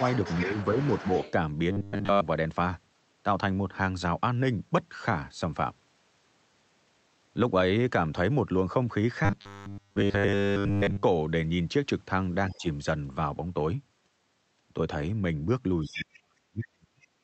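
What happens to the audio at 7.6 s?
At 7.6 s the speech is intact, with nothing beyond the ordinary coding character of the Opus call path, which limits the audio to about 8 kHz.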